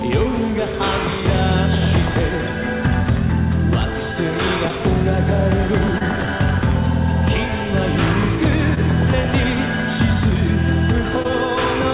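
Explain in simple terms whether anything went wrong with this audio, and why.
Short concealed packet loss occurs four times, at about 4.68–4.73 s, 5.98–6.02 s, 8.74–8.78 s and 11.22–11.26 s. Each time, roughly 20 ms of audio arrived too late, and the receiver patched the gap by stretching the preceding sound before blending back, leaving a brief smear or wobble.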